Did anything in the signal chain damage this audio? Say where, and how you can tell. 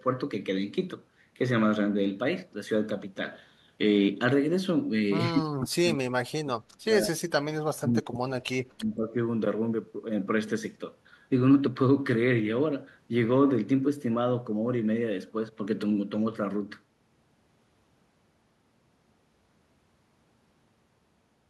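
Yes. The speech drops sharply, by roughly 40 dB, from 5.31 to 7.38 s and again from 7.77 to 9.16 s. This points to call processing, most likely speech suppressed in double talk: the echo canceller could not separate the local talker from the overlapping loudspeaker echo and turned both down.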